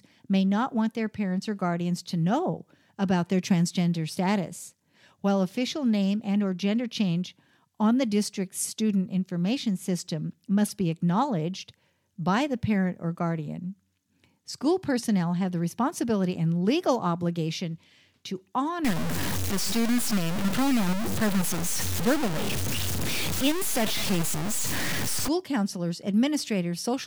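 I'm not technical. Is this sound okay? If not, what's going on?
No. From 18.85 to 25.28 seconds the speech turns rough and grainy, with the crackle rising and falling along with the voice itself, and the softest parts breaking up or dropping out. This is low bit depth without dither, likely from the audio being cut down to just 3 bits and truncated. Unlike steady background hiss, this grit exists only while sound is present and follows it closely, nearly as loud as the speech.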